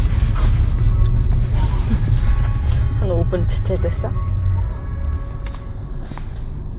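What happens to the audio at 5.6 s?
At 5.6 s the audio is intact: the sound carries on through the call path without a break or disturbance, band-limited to about 4 kHz as G.711 A-law telephone-grade coding leaves it.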